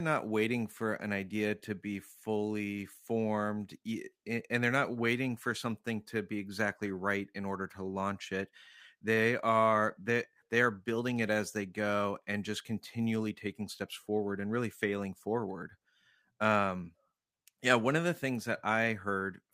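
Jitter buffer speed-up from 13.19 to 14.16 s, after "they go and just": pitch-period trimming removed about 50 ms, so the speech runs 4% fast at unchanged pitch.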